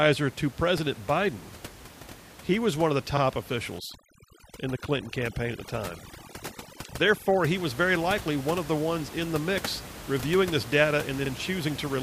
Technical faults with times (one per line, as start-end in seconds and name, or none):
3.79-7.45 overdone noise removal
7.22-7.26 overlapping chunks
11.26-11.30 overlapping chunks